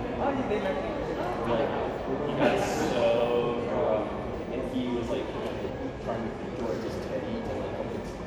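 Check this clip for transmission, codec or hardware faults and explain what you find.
Compressed frames skipped at 1.45, 4.33, 5.68 and 8.04 s. The decoder dropped whole frames, so the audio jumps forward about a fifth of a second at 1.45 s and roughly 150 ms at the others, consistent with frames of about 26 ms.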